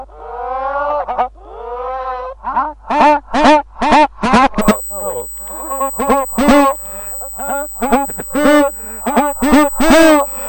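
From 4.62 s to the end, a USB whine sits under the sound: a steady tone at 8 kHz, strongest at its 16 kHz multiple, roughly 15 dB below the material. The bus's 125-microsecond microframe current draw leaks into the power or ground, imprinting that fixed rate on the audio. Its pitch never drifts, and it sits far above the 50 or 60 Hz family of mains hum, which marks it as digital-bus interference rather than acoustic feedback or hum.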